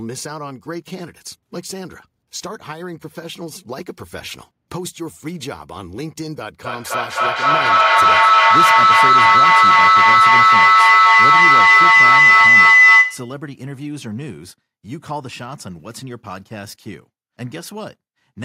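From 6.65 s to 13.4 s, a shrill tone near 2 kHz swells out of the speech, building with repeats roughly every third of a second and peaking about 18 dB above the talker before it cuts away. This is feedback howl: a microphone picks up a nearby loudspeaker carrying the same call, and each trip around that loop comes back louder. The repeats narrow onto the frequency the loop favours until the loop is broken.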